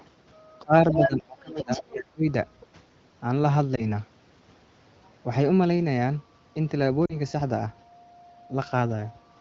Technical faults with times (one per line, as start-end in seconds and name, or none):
0.00-0.04 other side's voice leaking through
0.63-2.26 speech suppressed in double talk
0.91-1.09 other side's voice leaking through
1.56-1.82 other side's voice leaking through
3.75-3.89 lost AMR speech frames
7.06-7.16 lost AMR speech frames